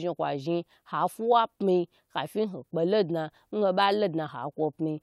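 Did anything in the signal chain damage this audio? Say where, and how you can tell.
No, nothing in this speech recording stood out as damaged on listening.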